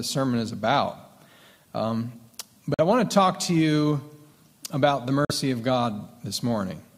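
At 2.74 s the audio cuts out to silence until 2.80 s, then comes back further along, as if it had kept playing through the hole. The same thing happens from 5.25 to 5.31 s. Both gaps are likely a Bluetooth dropout: audio packets didn't reach the headphones in time and got discarded. Each gap lost about 46 ms of audio, which fits two missing packets.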